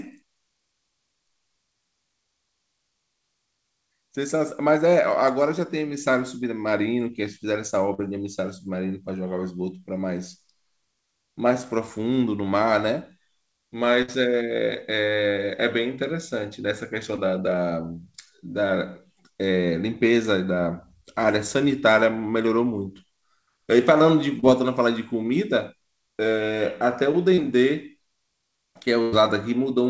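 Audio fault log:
7.94–8.00 s, 17.16–17.19 s, 24.39–24.44 s and 27.34–27.39 s, short concealed packet loss: 20 to 40 ms of the stream arrived too late each time, and the receiver bridged it by extending the preceding sound before blending back, leaving a brief smear or wobble where a short sound may drop out.
14.02–14.10 s and 29.02–29.14 s, burst of packet loss: about 60 ms and then 100 ms went missing in a row. The decoder stretched the last sound across each gap while fading it, giving a held buzz or thinning hiss in G.722 audio that stops at 8 kHz, before playback resumes further along.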